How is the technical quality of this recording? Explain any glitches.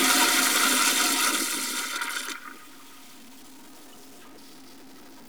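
Technical quality is poor throughout, because of one persistent fault: low bit depth without dither. The audio was most likely reduced to very few amplitude steps, which fits about 7 bits, and truncated rather than rounded, with no dither to decorrelate the error. The quantisation error therefore tracks the signal, sitting only around 25 dB below it. Across the whole clip this produces a grainy, gritty distortion that shifts with the sound, worst in quiet passages, where low-level detail sputters between steps or drops out to silence.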